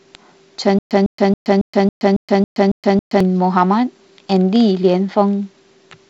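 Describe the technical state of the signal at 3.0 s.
At 3.0 s the speech is caught in a stutter with silent gaps, running 0.79 to 3.20 s. A 154 ms fragment repeats nine times, each followed by 122 ms of digital silence, likely a stalled stream replaying its last buffer.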